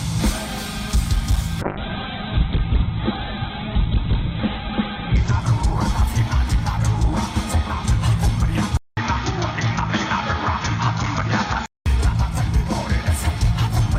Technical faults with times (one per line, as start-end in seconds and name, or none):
1.62-7.97 call bitrate drop
8.77-11.86 input switched to a poorer device